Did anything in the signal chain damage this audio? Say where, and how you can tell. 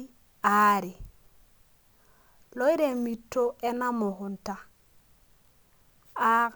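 Yes, at the converter: sample clock jitter mistimes samples, so error tracks waveform slope, a hiss rising on loud, bright speech and vanishing in pauses.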